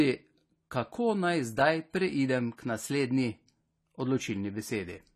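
Speech that has most likely been through low-bitrate AAC compression, in a form consistent with AAC-LC at around 32 kbps, for its whole length. With so few bits to spend, the encoder discards everything above 14 kHz and quantises the remaining frequency lines coarsely, so the sound is dull and smeared, and sibilants and sustained sounds pick up a plainly audible warbling, fizzy texture.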